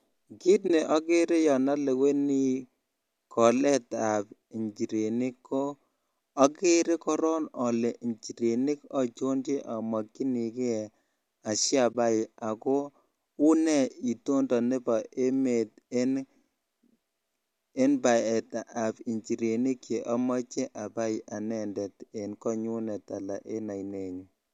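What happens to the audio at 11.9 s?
At about 11.93 s there's a short dropout, a case of AAC frame loss with muting, lasting roughly 20 ms until 11.95 s. That span fits two lost frames of about 10 ms each, which suits the short frames of the low-delay AAC the clip likely went through. The decoder zeroed the missing spectrum, so the overlapping windows fade the speech down and back up. You hear a soft-edged gap.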